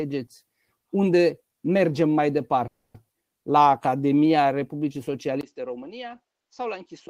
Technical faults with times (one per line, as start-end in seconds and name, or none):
2.67-2.96 call audio freeze
3.06-3.09 skip ahead
3.52-4.77 jitter buffer slow-down
5.41-7.10 input switched to a poorer device